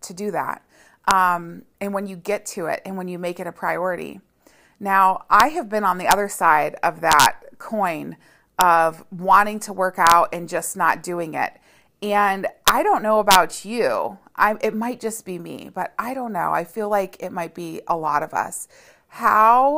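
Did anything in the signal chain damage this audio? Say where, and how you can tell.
Yes: integer overflow at a fixed-point gain or sample-format conversion stage. Sharp cracks land at 1.11, 5.40, 6.11 (after "have been on the"), 7.12–7.26, 8.61, 10.07–10.12, 12.68 (before "I don't know") and 13.31–13.35 s. Peaks only about 0 to 2 dB over full scale wrap to the opposite sign.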